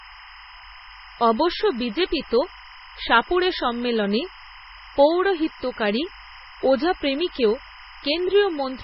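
From start to finish, a timecode bleed chirps behind the speech: linear timecode from a neighbouring track or cable has leaked into the audio. Its square wave flips between two pitches near 1 kHz and 2 kHz at a 25-frames-per-second rate, giving a steady, rapid warble sitting about 20 dB below the speech. On a spectrogram it shows as two bright horizontal bands near 1 kHz and 2 kHz, with their odd harmonics stacked above, unbroken through pauses.

The speech also carries heavy MP3 compression for its entire length, likely from encoding at a very low bitrate, which fits something around 16 kbps. Short of bits, the encoder has cut everything above 5.6 kHz and zeroed weaker frequency lines that pop in and out between frames. That leaves the voice dull, watery and swirling, with metallic chirps on s sounds and smeared consonant attacks. A spectrogram shows a hard ceiling at 5.6 kHz and speckled, blocky gaps below it.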